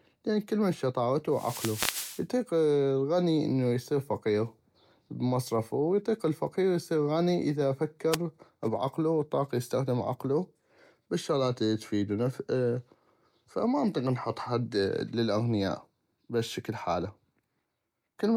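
At 1.30 to 2.26 s, after "لان كلمن شطاغتو", and again at 8.11 to 8.17 s, just before "بعقلو وطاق يستخدم عقلو", wireless microphone noise hits: the FM radio link fades, so receiver hiss swells into a static swish. Unlike a digital dropout, the speech is buried rather than silenced.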